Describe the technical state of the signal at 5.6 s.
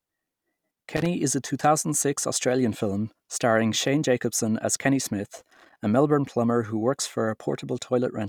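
At 5.6 s the speech is disrupted by loose connector crackle, which runs from 5.36 to 5.78 s, about 0.42 s in all. A worn or dirty contact in the signal path is making and breaking intermittently, so the audio is chopped on and off in rapid, uneven succession, with small pops where any DC offset on the line switches in and out. The result is an irregular burst of scratchy crackle laid over the signal for that span.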